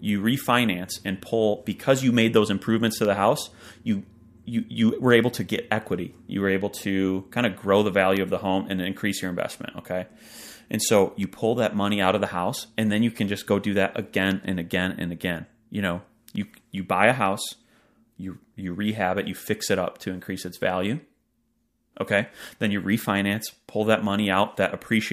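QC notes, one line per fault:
1.00 to 24.56 s, periodic USB or driver dropouts: evenly spaced ticks about every 1.02 s, around twenty in all, audible only under the speech. Each tick is a tiny gap, a fraction of a millisecond, left silent when a recurring system task stalls the audio stream.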